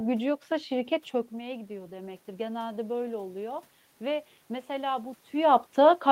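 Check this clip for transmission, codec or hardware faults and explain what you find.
One fault shows up: automatic gain rising, from 1.37 s to 3.67 s. Shortly after the talker moves away from the microphone at around 1 s, the input drops by about 14 dB, and the automatic gain control responds by slowly raising its gain by about 4 dB over those 2.3 seconds. Because that gain applies to everything the microphone picks up, the voice and the room noise behind it swell together, a gradual lift rather than a jump. The correction is only partial, so the voice stays noticeably quieter than before the move. The later level change near 5 s comes from the talker moving again.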